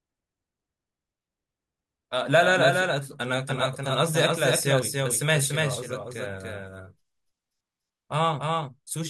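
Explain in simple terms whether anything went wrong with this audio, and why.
Throughout the speech there is a doubled audio track: a second, somewhat quieter copy of everything follows about a third of a second behind, giving a blurry double. It is likely that the sound was recorded twice through paths of different speeds.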